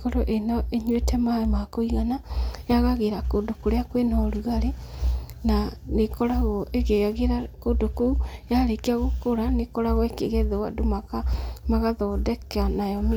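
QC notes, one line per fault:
Nothing stood out as a problem on listening.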